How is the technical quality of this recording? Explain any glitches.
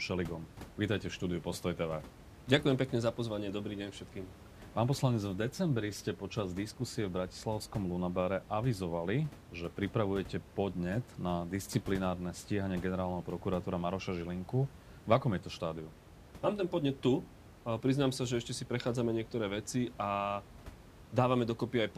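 No glitches; the recording's technical quality holds up throughout.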